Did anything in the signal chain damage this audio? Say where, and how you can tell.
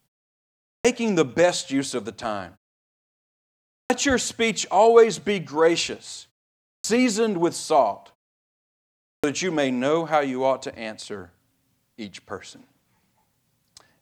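Yes, at the playback stage: clipped start after a pause. At 0.75, 3.8, 6.73 (before "with salt") and 9.13 s, roughly 0.1 s of onset is lost as the sleeping output device wakes. This is not muted pauses, which would silence only the gaps and cost no speech.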